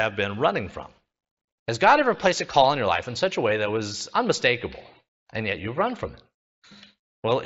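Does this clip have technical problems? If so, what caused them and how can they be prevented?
No, there are no technical problems in this speech clip. The sound reaches up to about 8 kHz and has a faint graininess on its louder moments, which fits the Bluetooth mSBC headset codec it was carried over.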